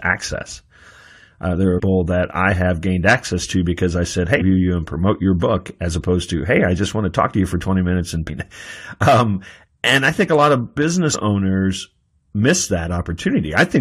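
Damaged data in a compressed stream makes the decoder misread its frames and lose sync until it finds the next frame header. In this speech, each break is a brief chirp or blip, at 1.78 to 1.80 s, 4.40 s, 8.28 to 8.30 s and 11.13 to 11.16 s.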